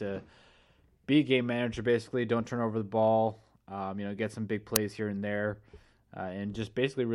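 At 4.76 s, between "know get some big" and "here and there", a sharp, loud crack lasting about 2.9 ms cuts into the speech. This is an uninitialised buffer: a block was played before audio was written into it, so leftover memory came out as samples. Its length fits a 128-sample buffer.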